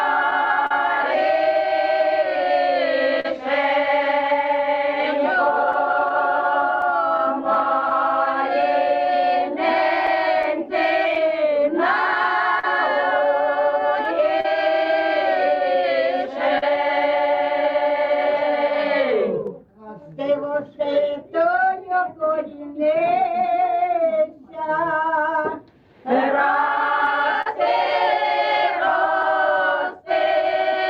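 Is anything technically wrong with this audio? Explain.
Yes. The audio shows clock drift between sender and receiver throughout, repeated timing corrections from 1.67 s to 30.61 s, and scattered short gaps in two stretches.

The clock drift between sender and receiver runs for the whole clip. The sender's clock is about three percent slower than the receiver's, so audio arrives more slowly than it is played out and the jitter buffer tends to drain. The receiver must keep stretching the stream to avoid running dry. The result is not one audible event but a recurring irregularity in timing across the clip.

The repeated timing corrections, from 1.67 s to 30.61 s, are how the receiver copes with that slow sender. It repeats short pieces of sound again and again, playing the material at about 98% speed and adding a few hundred milliseconds of duration in total. Each insertion is small and unevenly spaced, so the effect is faint hiccups and a slightly dragging, unsteady tempo rather than any clear break.

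Scattered short gaps appear from 0.30 s to 16.63 s, around twenty of them, with none much longer than 40 ms. A second, sparser cluster of about four falls between 27.06 s and 29.60 s. Each marks a packet that was lost or arrived too late, and the receiver bridges the hole by extending the preceding sound. Only a few percent of each stretch is concealed, so these come through as brief ticks or smears in otherwise continuous sound.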